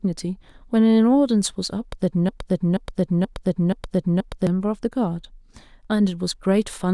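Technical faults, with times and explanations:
2.29–4.47 s: broken-record loop. A 0.48 s fragment repeats five times back to back, likely a stalled stream resending its last buffer instead of new audio.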